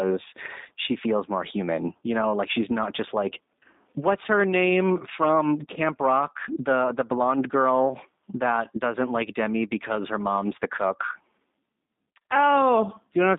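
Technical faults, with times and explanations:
throughout G.729 codec: the speech was carried by a low-rate voice codec whose sound fits G.729A at 8 kbit/s. Instead of keeping the waveform, it sends a vocal tract filter, a pitch predictor and a few pulses per frame, and the far end rebuilds the voice from those. Only 200 Hz to 3.7 kHz survives, so the speech sounds thin and boxed in, and the rebuilding leaves a plainly audible buzzy, slightly synthetic roughness.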